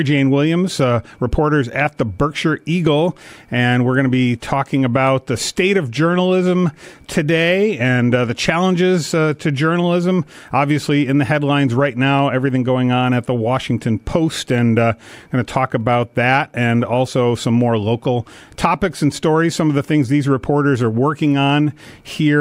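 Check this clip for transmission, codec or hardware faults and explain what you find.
One fault stands out. At 15.81 s there is a single sharp click, heard as a thin vertical line across the spectrum. This is likely dropped samples: a handful of samples, well under a millisecond, went missing. The waveform jumps abruptly, but no sound is lost.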